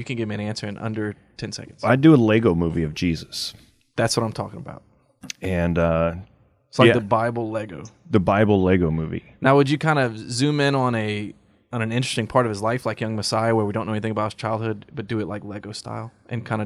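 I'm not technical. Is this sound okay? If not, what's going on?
Yes, this speech recording is okay. There is no technical problem to point to anywhere in it.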